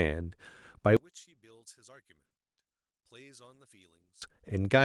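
From 0.97 s to 4.22 s the speech collapses when heard in mono: the centred voice drops by about 33 dB, leaving only a faint residue of whatever differs between the channels. The likely cause is one channel inverted, so the shared centre content cancels on summing. On a waveform of the mono mix the amplitude shrinks to a sliver for that span. A spectrogram shows the whole band fading to near-empty and returning at 4.22 s.

At 2.25 s a short stall from a late packet holds the current sound for about 50 ms, through 2.32 s. The receiver's buffer ran dry, so it stretched the last fragment until the data arrived, then resumed exactly where it left off. Nothing is lost, but the syllable drags. A spectrogram shows a smeared, flat patch where harmonics stop evolving, and the waveform shows a briefly repeating cycle.

From 2.42 s to 2.59 s the audio halts completely for about 150 ms, then resumes from the same point with nothing skipped. 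This is a call audio freeze, likely from packets delayed in transit leaving the playback buffer empty. It sounds like a sudden hitch in the flow. The waveform shows a flat line across the gap, and the spectrogram has a clean vertical blank band.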